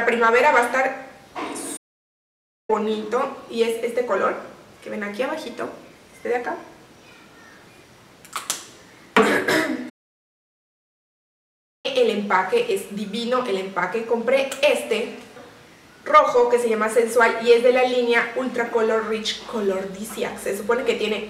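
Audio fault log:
1.76–2.70 s and 9.89–11.86 s, playback stall: the sound cuts to silence mid-flow for about 0.9 s and then about 1.9 s before resuming. The player most likely ran short of buffered data or had its output thread blocked until it recovered.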